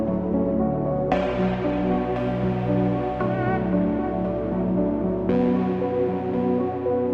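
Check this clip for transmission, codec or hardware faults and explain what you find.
There is one fault: an adaptive stream starting at a low bitrate. From 0.0 to 2.0 s the sound is dull and smeared, with nothing above about 8.2 kHz and coarse, watery codec artefacts. At 2.0 s the treble and clarity jump back in at once, with no gap or dropout. The player began on a cheap version of the stream so playback could start quickly, then switched up once it had gauged the connection. The narrow band and heavy artefacts point to a low-rate Opus encoding near 16 kbit/s, and the cleaner sound afterwards fits a step up to about 64 kbit/s.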